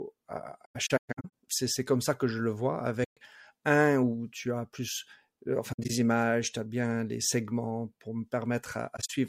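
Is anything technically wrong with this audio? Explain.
Yes. The speech has four gaps from AAC frame loss with muting: the decoder lost compressed frames and replaced their spectrum with silence, so overlapping windows fade sound out and back in. Each gap is soft-edged.

From 0.65 to 1.30 s, short dropouts scatter across the span, the longest lasting about 150 ms. From 3.03 to 3.17 s, after "que je le vois" and before "un où tu as", one hole of about 130 ms points to six lost frames. From 5.72 to 5.90 s, between "tu as plus euh" and "images tu as bien", brief holes scatter over about 170 ms, the longest about 70 ms. From 8.97 to 9.10 s, a similar small cluster appears.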